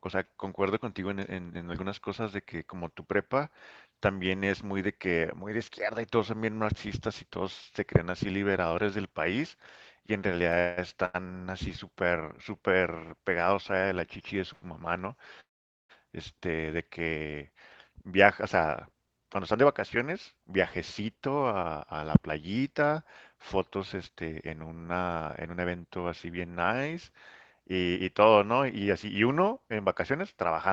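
From 10.51 to 11.16 s the speech stutters: repeated stalls, four jitter-buffer underruns from late packets, with the last sound extended for about 305 ms in total, the longest gap 182 ms. At 14.53 s a short stall from a late packet holds the sound for 93 ms before playback resumes where it stopped. From 15.40 to 15.91 s a call audio freeze follows: the sound is carried on briefly and then falls to about 460 ms of silence, likely because packets were held up in transit and the buffer emptied. From 17.50 to 24.25 s a jitter buffer speed-up trims short pitch-period segments, running about 7% fast at unchanged pitch and removing roughly half a second. A second speed-up from 25.18 to 25.85 s runs about 13% fast and removes roughly 100 ms, sounding hurried.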